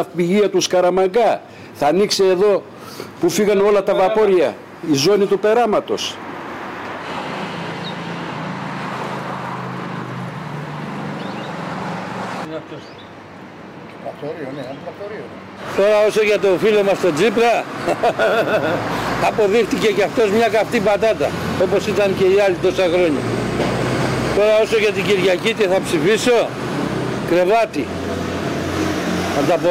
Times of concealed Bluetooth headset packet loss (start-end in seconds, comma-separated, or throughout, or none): none